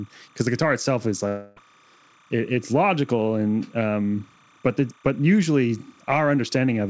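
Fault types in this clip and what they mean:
timecode bleed: A steady chirping warble runs behind the speech for the whole clip, about 35 dB below it, flipping between tones near 1 kHz and 2 kHz. It is linear timecode leaking in from an adjacent track or cable, with a rhythm that fits 29.97 fps code.
long network dropout: From 1.28 to 1.58 s the speech gives way to a fading, buzzy continuation of the last sound, with no true silence, then resumes with that stretch missing. This is likely a long loss of incoming audio that the receiver concealed.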